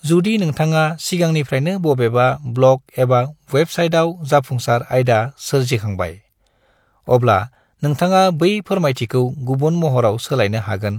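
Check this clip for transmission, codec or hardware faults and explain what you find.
No faults can be heard anywhere in this speech recording. Close listening turns up no event or passage that needs explaining.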